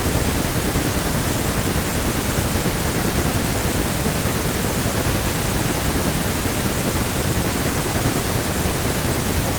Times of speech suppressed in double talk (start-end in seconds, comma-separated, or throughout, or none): none